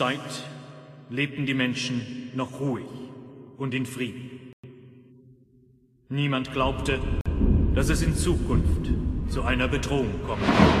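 Packets likely failed to reach the headphones in time, a Bluetooth dropout, so the output went silent from 4.53 to 4.67 s and again from 7.21 to 7.26 s. Each hole has abrupt edges or a fade of a few milliseconds, and the sound resumes further along, as if it had kept playing.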